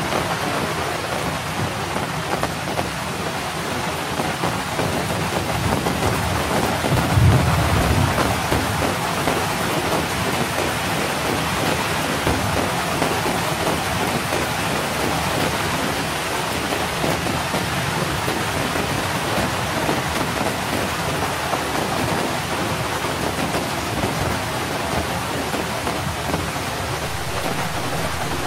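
At 27.08 s a DC step occurs: the waveform's zero line jumps to an offset of about -31 dBFS and holds to the end at 28.47 s. It sounds like a single low thump. The waveform shows a sudden baseline shift, and the spectrogram shows a brief broadband low-frequency burst at the onset.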